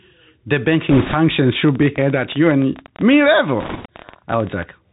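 Throughout, the speech carries the Bluetooth CVSD headset codec, consistent with a 64 kbit/s CVSD link. Its one-bit delta coding cuts everything above 4 kHz, and its adaptive step cannot follow fast loud high content. The result is plainly audible: scratchy sibilants, slope distortion on louder peaks, and a granular hiss underneath.

From 0.90 to 1.15 s, bit errors on the Bluetooth voice link produce a rushing, crackly noise over the speech. The error rate is around 5 percent. Each flipped bit nudges the delta decoder only slightly, and the error dies away, so there are no sharp clicks.

From 1.69 to 4.64 s, a train of clicks ticks over the speech and through the pauses. There are about 40 clicks, averaging 12.2 per second, and the spacing is irregular. Their peaks sit roughly 5 dB above the signal. The cause is likely interference pulses or a struggling interface.

From 3.60 to 3.87 s, a second burst of bit errors at around 5 percent brings back the same crackly rush. 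It overlaps the click train there, so the two disturbances stack during that stretch.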